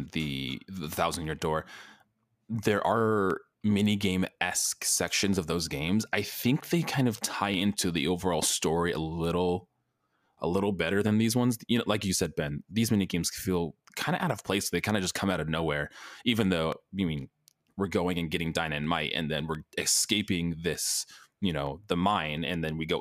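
From 0.49 s to 22.37 s, a click recurs every 0.71 s while the speech runs. There are about thirty in all. These are clock drift buffer slips. Two unsynchronised clocks, likely off by roughly 500 ppm, force a brief skip or repeat of about fifteen samples at each click.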